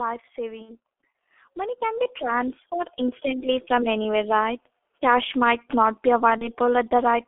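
The whole clip of speech is squeezed through a G.723.1 codec, and it's heavy going. The band is narrow, roughly 300 Hz to 3.5 kHz, so everything sounds muffled and a bit hoarse. Consonants smear together because the codec only refreshes its model of the voice every 30 ms or so. The thin, rough texture fits a low-rate stream of around 6.3 kbit/s.

At 0.62 s there's VoIP packet loss concealed by the speech codec, lasting until about 0.76 s. For those 60 ms or so the decoder has nothing new to work from. It keeps replaying its last pitch and filter at falling gain, so the speech stretches into a fading extrapolated sound. That span fits two lost frames. Because each frame leans on the previous one, the voice stays weak or distorted for a moment after real audio comes back.

From 1.39 s to 3.98 s the automatic gain is rising. The AGC decided the input was too quiet and eased its gain up by about 9 dB over those two and a half seconds. 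Speech and background swell together.

The second packet-loss gap hits at 6.38 s and runs to about 6.48 s. It's shorter, about 30 ms, consistent with a single lost frame. You get the same brief extrapolation and a weak stretch while the decoder recovers.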